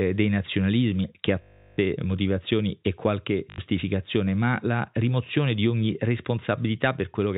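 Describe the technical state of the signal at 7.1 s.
At 7.1 s the speech is intact, carried by the telephone-band G.711 coding with nothing above 4 kHz.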